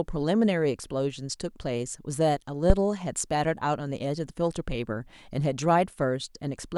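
At 2.70 s a phantom power thump lands: a deep, low-frequency bump lasting until about 2.76 s, dying away with a quick 13 ms decay. It comes from supply voltage switching on a live input, the DC step pushing through the coupling capacitors as one dull pulse. Unlike a plosive pop, it has no breath or airflow character and is not tied to the speech; unlike a click, it is a low thud, not a sharp tick.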